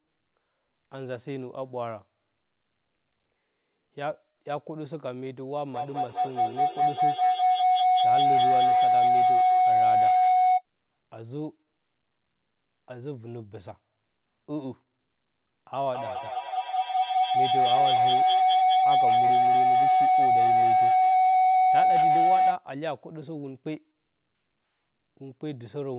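Feedback howl appears from 5.74 to 10.65 s and again from 15.94 to 22.59 s. A microphone-to-loudspeaker loop gains level each pass. Repeats swell into a tone near 700 Hz, coming back about every fifth of a second, peaking about 11 dB above the speech.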